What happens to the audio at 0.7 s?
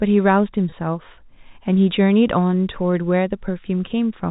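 At 0.70 s the sound briefly freezes into a slightly held, buzzy tone that lasts until about 0.72 s before normal speech resumes. This is packet loss with pitch repetition. Roughly 20 ms of audio, which fits a single lost packet, never arrived. The receiver filled the hole by repeating the last pitch period it had, and that recycled waveform produces the brief buzz. The narrowband telephone character of the G.711 coding carries straight through the patch.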